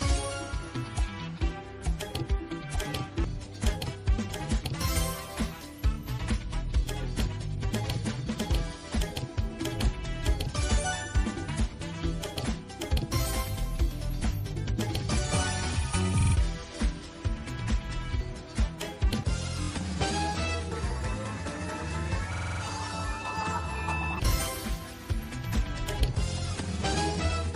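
Repeated frames stutter the sound at 5.93, 16.2, 19.6, 22.3 and 24.0 s, replaying 23 to 93 ms blocks (fitting whole codec frames) one to six extra times.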